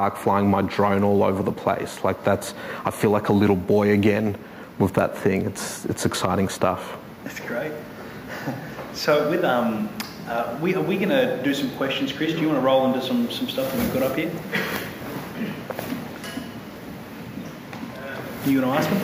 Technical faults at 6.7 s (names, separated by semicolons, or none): none